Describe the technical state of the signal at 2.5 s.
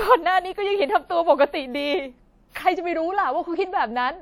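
A short hiss creeps in just ahead of the attack at 2.49 s and runs to 2.55 s, so the onset of the speech sound there arrives softened and smeared rather than crisp. That is pre-echo, smeared over about 59 ms. The codec spreads its quantisation noise evenly across a whole transform block, and because this sharp attack lands late in the block, noise sized for the loud part also spills into the quiet stretch before it.

Under that, the speech has a ringing, washy quality with a hiss that swells and fades with the signal, and nothing survives above 16.6 kHz. This is likely WMA compression, with plainly audible codec damage that points to a low bitrate, in the region of 48 kbps. Long transform blocks smear the quantisation noise over tens of milliseconds, which is what makes the pre-echo possible, and weak spectral lines are zeroed out.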